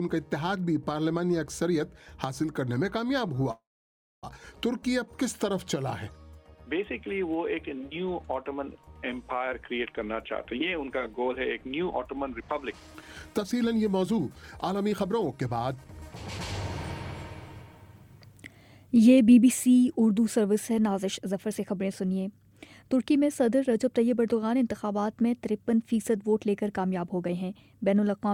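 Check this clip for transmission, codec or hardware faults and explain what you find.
Three faults are audible: a call audio freeze and two jitter buffer speed-ups.

From 3.51 to 4.25 s the sound halts. A brief fading tail gives way to about 0.6 s of silence, then resumes where it stopped, now 714 ms later. Delayed packets likely emptied the jitter buffer.

From 9.44 to 15.85 s, jitter buffer speed-up plays the sound at 111% speed without a pitch change. Short pitch-period pieces totalling roughly 0.7 s are cut, so it feels hurried. At 22.43 to 22.83 s a brief 107% speed-up trims a few tens of milliseconds.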